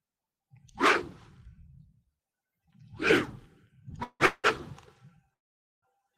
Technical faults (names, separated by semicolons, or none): call audio freeze